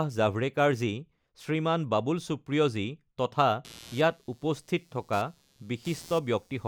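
Computer load swings disturbed the audio circuit's shared ground from 3.65 s on, causing computer activity noise: a faint buzz pulsing about 150 times per second beneath the speech.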